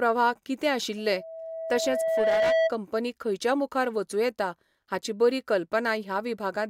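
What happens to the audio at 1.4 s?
At 1.4 s a steady 650 Hz tone is swelling up under the speech, partway through a loudspeaker feedback squeal that runs from 0.98 to 2.73 s. It builds over roughly a second and a half to sit about 5 dB above the speech, then cuts off just before "खंयच्या मुखार". The microphone is picking up the loudspeaker it feeds, and at 650 Hz the loop gain exceeds one, so that frequency keeps reinforcing itself.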